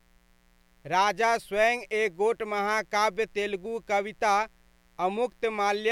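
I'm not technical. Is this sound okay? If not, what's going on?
No. Underneath the speech, from start to finish, there is a faint, steady, raspy buzz that never changes. This is mains buzz. Electrical interference from the power supply, perhaps from a light dimmer, a power adapter or a poorly shielded cable, gets into the recording. It pulses in step with the 60 Hz mains supply, and those pulses carry a whole ladder of higher tones, which give the buzz its rough, harsh edge.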